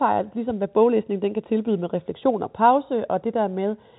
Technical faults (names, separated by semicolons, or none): none